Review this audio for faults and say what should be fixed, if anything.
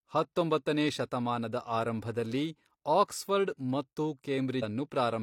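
At 4.59 to 4.64 s the speech jumps abruptly forward with a brief blip, likely a stream segment skipped: one segment failed to load, so the player continued with the next and the intervening audio never played. Enabling segment retries and a deeper playback buffer would prevent it.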